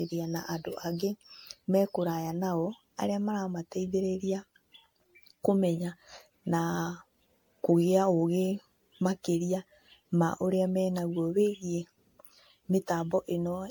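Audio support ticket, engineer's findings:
Generation loss, throughout. Swirly, hollow, smeared speech, blurred attacks, nothing above 19.9 kHz. Likely cascaded lossy re-encoding, around ten passes, consistent with MP3 at 96 kbit/s; each pass requantises on a shifted frame grid, compounding noise and spectral holes.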